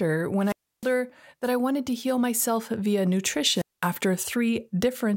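Wireless microphone squelch dropout hits this speech twice, from 0.41 to 0.93 s, just before "that I wanted to", and from 3.50 to 3.91 s, after "to heal myself via": the radio link fades, hiss rises, then the receiver's squelch mutes output for about 0.31 s and 0.21 s.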